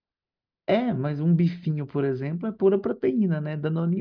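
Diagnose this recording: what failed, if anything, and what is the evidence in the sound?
Nothing in the speech signal points to a failure at any stage, from capture through conversion and transport to playback.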